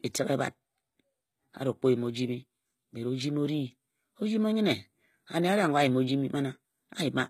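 Speech with plainly audible HE-AAC compression damage throughout: the upper band sounds synthetic and gritty, with sibilants turning metallic or lispy. Likely cause is HE-AAC v2 encoding at a very low rate, fitting about 20 kbps, with spectral band replication rebuilding the treble from copied lower bands.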